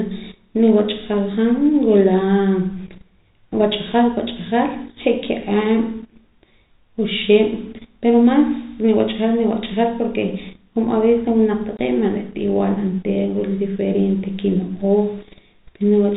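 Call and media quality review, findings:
Packet loss filled with silence, 11.77 to 11.79 s: a 20 ms hole in the speech with hard edges. Points to two 10 ms packets dropped and the jitter buffer playing zeros instead of concealing. Sits on top of G.711 telephone coding, heard as the usual 4 kHz ceiling with faint level-following grain.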